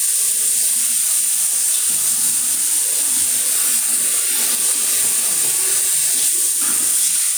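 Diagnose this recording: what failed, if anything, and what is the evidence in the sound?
Input gain, likely set too high before a fast limiter, causes gain pumping throughout: the gain swings roughly 10 dB as each loud sound pulls it down.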